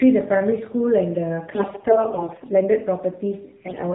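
Throughout, the AMR narrowband mobile codec cuts everything above 4 kHz and leaves the speech plainly buzzy and synthetic, which fits a low mode near 7.4 kbps. A simple low-pass filter would dull the speech without adding that buzz.

From 1.48 to 2.48 s, and again from 3.66 to 3.83 s, AMR bit errors garble a fair share of the less protected bits in each frame. Pitch and level hold, but the speech turns hoarse, scratchy and gargly. Lost frames would instead drop out or repeat.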